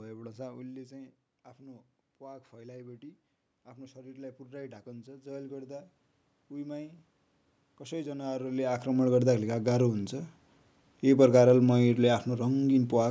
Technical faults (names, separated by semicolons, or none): automatic gain rising